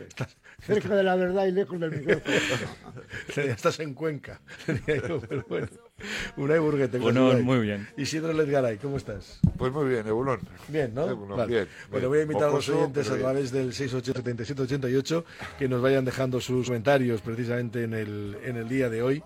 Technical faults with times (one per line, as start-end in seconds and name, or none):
4.51-4.57 damaged data in a compressed stream
6.97-7.03 damaged data in a compressed stream
14.12-14.18 damaged data in a compressed stream
16.63-16.69 damaged data in a compressed stream